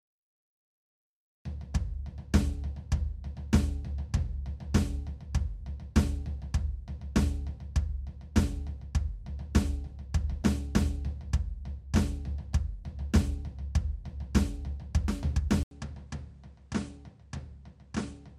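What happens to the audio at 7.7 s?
Nothing goes wrong at 7.7 s: the music plays through that moment intact, with no dropout, click or other audible fault.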